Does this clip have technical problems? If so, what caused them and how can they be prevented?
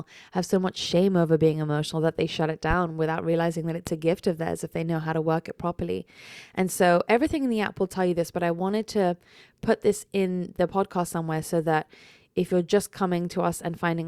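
Yes. The speech carries two loud pops, at 2.71–2.74 s and 3.87–3.91 s. Each is a single sharp transient lasting under 40 ms, peaking about 10 dB and about 15 dB above the speech, which continues underneath. The likely cause is a sudden voltage step or pulse, such as static discharge, a switch, or a loose connector, entering the signal chain and being shaped by the following circuitry. Secure cables, avoid switching during recording, and ground the equipment properly to prevent it.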